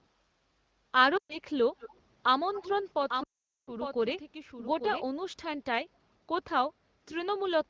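Right at the start, from 0.23 to 0.84 s, the room sound underneath sags, by about 6 dB at the deepest and for a bit under half a second in total. That's the background gated by the echo canceller. While the far end's audio was coming out of the loudspeaker, the canceller pulled the mic gain down to keep it from feeding back, and the ambience returns when it lets go.

Then at 1.17 to 1.39 s there's the first patch of lost AMR speech frames. About 120 ms of audio failed to arrive intact, which fits a run of around six 20 ms frames. The decoder reused the last good frame's settings with its gain falling, so the sound drops to near silence within a couple of frames before it picks back up a little rough.

At 1.79 to 1.99 s, and again at 2.54 to 2.9 s, a faint delayed copy of the speech sits underneath, trailing by 212 ms and about 15 dB down. It's an echo leak, likely from a speakerphone on the other side whose echo canceller didn't catch everything its mic heard and sent some of it back down the line.

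From 3.1 to 5.04 s the whole signal is doubled. A second full-band copy runs roughly a second behind at around 5 dB below the original. It has no room tail, and it cuts in and out abruptly, which points to a doubled audio track from a second, slower capture path.

Inside that stretch, from 3.23 to 3.73 s, comes the second and longer run of lost AMR speech frames. It's about 440 ms, which fits something like 22 frames. Here the concealment drops the sound to near silence within a couple of frames, and it comes back weak and a bit raspy.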